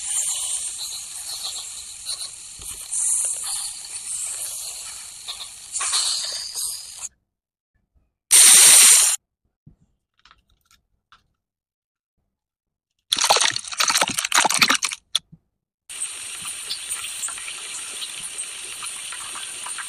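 The audio opens with a doubled audio track already under way, lasting until 6.44 s: a full-band copy trails the original by roughly a tenth of a second, around 5 dB quieter, with no decay, then cuts off abruptly. Likely cause: a second, slower capture path.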